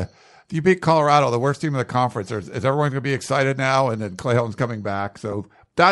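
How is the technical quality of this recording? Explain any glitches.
The recording has audible faults: codec damage throughout, plus two brief dropouts.

Bluetooth LC3 compression runs through the whole speech clip and is likely the cause of its coarse texture. At this bitrate, which fits a 48 kbps LC3 stream with 10 ms frames, the encoder cannot afford to code the upper spectrum precisely. It zeroes much of that region and fills it with noise, so the speech carries a plainly audible breathy, grainy edge on its higher frequencies.

Lost LE Audio frames occur at 3.27 s and again from 5.32 to 5.34 s. Each time, about one 10 ms frame failed to arrive, and the decoder concealed the gap by repeating the previous frame's spectrum with randomised signs. Because only one frame went missing, there is no gradual fade. Instead, the gap is briefly filled with that reused spectrum in place of the true sound for that instant.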